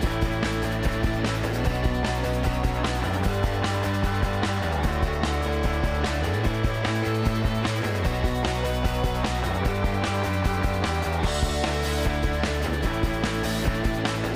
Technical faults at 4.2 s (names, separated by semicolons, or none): none